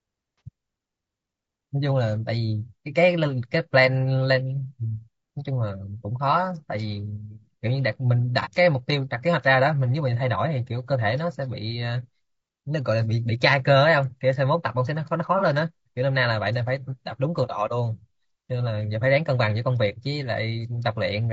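Low-delay AAC compression runs through the whole speech clip, likely from AAC-ELD, the low-delay AAC variant used in video calls, at a rate that fits about 32 kbps. The codec splits each short frame into a few hundred frequency lines under a low-delay window. At this rate there are too few bits to code them accurately, so the damage is plainly audible as rough, grainy speech, with noise filling the gaps between harmonics and a top band that sounds lowered or synthetic.

AAC frame loss with concealment occurs three times, at 0.38–0.41 s, 8.42–8.47 s and 15.38–15.43 s. Each fits a single lost frame, about 30 ms of audio. The decoder had no data for those moments, so it rebuilt them from the last good spectrum, either scrambling signs or interpolating energy. Because each gap is short, it is heard as a brief smeared, noisy or phasey patch rather than a fade to silence.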